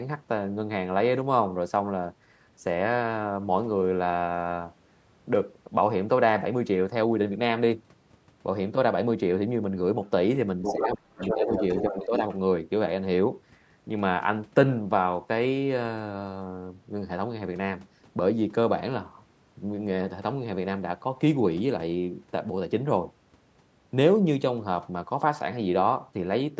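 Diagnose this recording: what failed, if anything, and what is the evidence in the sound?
The other side's voice leaks through at 10.63 to 10.74 s and again from 11.21 to 12.37 s. A second voice sits only a few decibels under the talker, a brief scrap first and then a longer stretch. This points to the call-processing stage: the far end was playing on a loudspeaker and the echo canceller likely failed to subtract all of it from the microphone signal, so the residue passed through.

Speech is suppressed in double talk from 10.73 to 11.62 s and from 11.82 to 12.21 s, overlapping those leaks. In the first span the talker's level falls very deeply, for well over half a second in total. The second is a milder dip of roughly a third of a second. With both sides active, the canceller likely could not tell near speech from echo and attenuated everything, all within a band that stops at 8 kHz.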